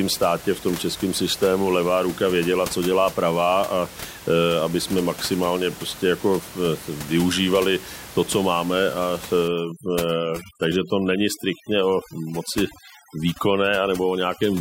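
From 9.48 s to the end at 14.60 s, overdone noise removal takes hold: the room noise, about 16 dB below the speech, drops and breaks up into twinkling specks, and quieter parts of the voice vanish. Unlike a dropout, sound persists throughout.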